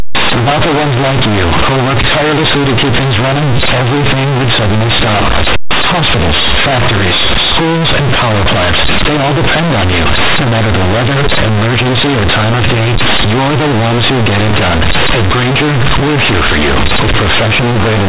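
From start to finish the speech is mangled by companded audio read as linear: mu-law telephone bytes are being played as plain 8-bit samples without expansion, so every sign flip slams across half the range, and quiet passages blare as harshly as loud ones, with heavy buzzing and loud noise filling the pauses.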